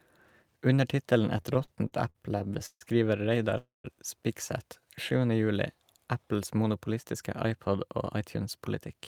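A speech recording with three network-related timing faults. From 1.37 s to 2.83 s there are repeated stalls (stutter): the audio halts thirteen times, with the receiver holding or extending the last sound in each gap, about 372 ms of filler in all, the longest single gap 146 ms. That is about a quarter of the span. No speech is lost, but delivery drags and stutters because packets were arriving late or more slowly than they were played out. At 3.58 s a call audio freeze starts and lasts to 3.86 s. The final sound is carried on as a decaying buzz or hiss for a moment and then drops to silence for about 160 ms, giving 266 ms of inserted time before the speech resumes where it left off. The likely cause is packets held up in transit, leaving the jitter buffer empty and pushing the playout delay back by the same 266 ms. From 6.90 s to 9.02 s there is jitter buffer speed-up. The receiver shortens its backlog by cutting many small pitch-period-sized pieces, removing around 150 ms in total. 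Speech runs at about 107% of normal rate with pitch unchanged, so this last stretch sounds slightly hurried.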